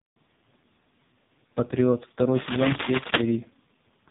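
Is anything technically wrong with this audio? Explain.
Yes, there are two faults. Throughout, the speech carries heavy AMR narrowband mobile codec damage. Nothing passes above 3.8 kHz, and a pulse-driven vocal-tract model rebuilds the voice, leaving a buzzy, synthetic tone that fits the codec's lowest mode, around 4.75 kbps. Those artefacts, not plain low-pass filtering, mark it as a codec.

From 2.34 to 3.21 s, cable scratch noise appears: dense, uneven rustling bursts somewhat louder than the speech, likely from a worn cable or connector whose contact resistance is changing. It is irregular and temporary, not steady hiss.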